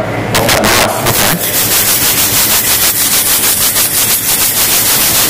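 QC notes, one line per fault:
throughout, integer overflow. The signal is driven about 16 dB past full scale, and instead of being limited the samples wrap around to the opposite sign. Roughly seven percent of samples go over. Each loud peak jumps from one extreme of the range to the other in a single step. That produces violent, harsh cracks on every loud moment. They are far sharper and more broken than ordinary clipping, which would only flatten the tops.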